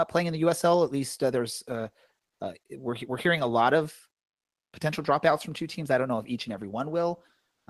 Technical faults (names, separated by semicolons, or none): comfort noise in place of the background